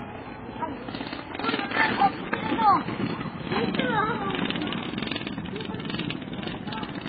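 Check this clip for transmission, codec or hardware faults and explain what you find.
One codec fault runs through the whole clip: transcoding between lossy codecs. Nothing reaches above 4.7 kHz, a flat ceiling on a spectrogram, and the sound has a smeared, watery edge. This likely comes from a low-rate MP3 re-encoded as HE-AAC, which fits roughly 16 then 20 kbit/s, with both codecs' artefacts stacked together.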